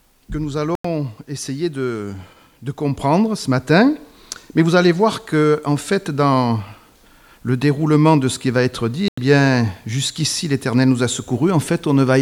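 At 0.75–0.85 s and 9.08–9.18 s, sharp 93 ms silences appear as flat waveform gaps and blank spectrogram columns, likely a Bluetooth dropout of late, discarded packets.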